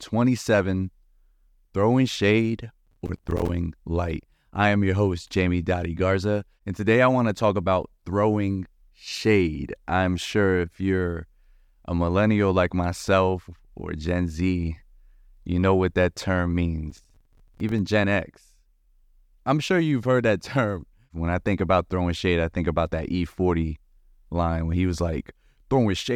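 From 2.86 to 3.49 s, and again from 16.90 to 17.79 s just after "know what that term", the speech breaks into processor overload crackle. The processor falls behind and misses a run of buffer deadlines. Each missed buffer is filled with silence, so the sound is chopped by a dense string of tiny hard-edged gaps spaced at what fits buffers of about 5 ms. The result is a gritty tearing over the speech that stops once the load clears.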